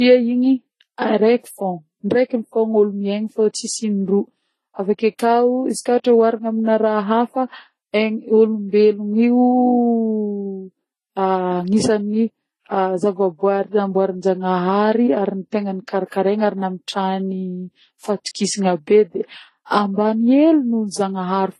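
Throughout the speech, nothing is heard above 12.4 kHz, and the artefacts of two different codecs are heard together, which points to likely transcoding between lossy codecs, low-rate MP3 then Vorbis.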